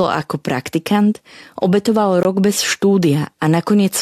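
A speech clip with a gap between stream segments from 2.23 to 2.25 s: timestamps of adjacent 2-second segments leave about 19 ms unaccounted for, filled with silence. The waveform shows a flat, hard-edged hole, and the spectrogram a clean vertical blank stripe. No audio is lost.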